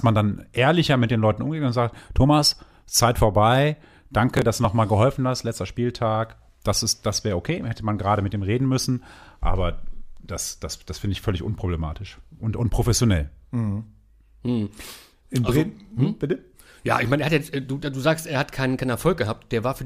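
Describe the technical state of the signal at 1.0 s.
At 1.0 s the signal is intact, with no dropout, distortion or other fault audible at that point.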